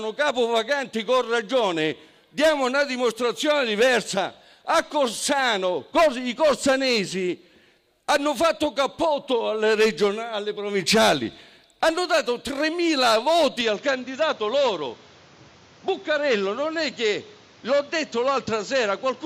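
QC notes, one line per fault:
13.61 to 19.25 s, input switched to a poorer device: at 13.61 s the sound abruptly turns duller, with nothing above 7.6 kHz from there to the end, and a new background noise appears roughly 30 dB under the signal. There is no gap at the switch and no clear level jump. The new noise floor and tone, not just lost treble, suggest a different microphone or headset call profile likely took over, rather than a filter or codec bandwidth drop.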